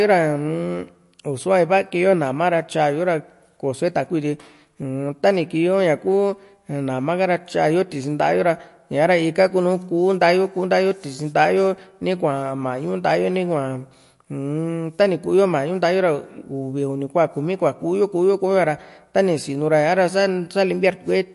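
From start to finish the speech has no content above 11.3 kHz, and the codec damage is plainly audible: a watery, swirling texture, with chirpy s sounds. This is likely MP3 compression short on bits, which fits a bitrate around 48 kbps, trimming treble and dropping weak frequency components.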